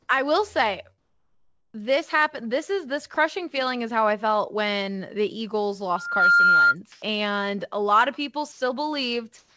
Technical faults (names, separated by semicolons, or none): comfort noise in place of the background; sound dropped by the voice detector; loudspeaker feedback squeal